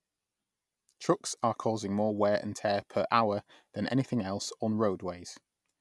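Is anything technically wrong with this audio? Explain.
No, nothing technically wrong turns up here; this speech recording comes across without any audible faults.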